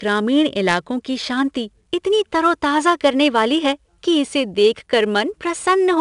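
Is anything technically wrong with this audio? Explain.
Yes. The speech carries 4-bit ADPCM compression throughout the clip, and the damage is plainly audible. Each sample is coded as a coarse 4-bit step from a prediction, so quantisation noise rides with the signal level. Loud syllables pick up a gritty hiss, and sharp onsets smear where the step size lags. A spectrogram shows a broadband noise haze that swells and fades with the speech, plus a hard ceiling at 10.7 kHz. That ceiling suggests a sample rate near 22 kHz, which fits a stream of roughly 89 kbps.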